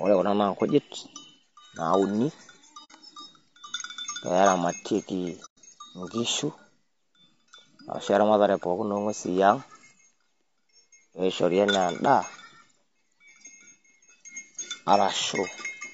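From the start the speech sounds rough and grainy, with hiss filling the gaps between harmonics and a thin, artificial top band. This is likely low-delay AAC compression at about 32 kbps. A spectrogram shows smeared harmonics and speckled noise between them.

At 2.84–2.91 s and again at 5.45–5.58 s, AAC frame loss with muting leaves soft-edged holes. The sound fades out and back in. On a waveform these look like tapered near-silent gaps. On a spectrogram they appear as blank vertical bands, the second one wider.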